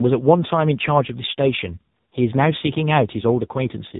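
A short speech recording carries tandem speech coding from start to finish. The sound passed through G.726 at 32 kbit/s, then G.711 mu-law at 64 kbit/s, and finally AMR-NB at 6.7 kbit/s. It was decoded and re-encoded at each hand-off, so two lossy speech coders stack their errors. The result is a rough, muffled, warbling texture, with nothing above 3.8 kHz left by the narrowband chain.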